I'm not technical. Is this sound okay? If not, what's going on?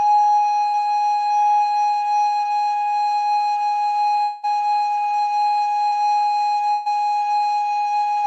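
No. The music skips in four places, all caused by pieces of the stream arriving late or not at all.

Short concealed packet loss happens twice, at 0.71 to 0.75 s and at 5.89 to 5.94 s. Each time, about 20 ms of music never arrived. The player filled the gap by stretching the sound that came just before, then slid back into the real music. You hear a tiny smear or wobble. A very short sound right there may vanish.

At 4.23 to 4.45 s, about 200 ms of music goes missing. The player keeps the last sound going for that whole stretch as a held buzz or hiss that fades. It never drops fully to silence. Then the music picks up again further along, without the lost part. This is likely a long network dropout, where nothing got through for a moment.

A burst of packet loss hits at 6.72 to 6.88 s. Several pieces in a row were lost, about 140 ms of music in total. The player held the last sound and turned it down as the gap went on. 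A tone becomes a held buzz. Other sounds become a fading hiss. There is no silent gap. The music then jumps ahead, and the part in between is gone.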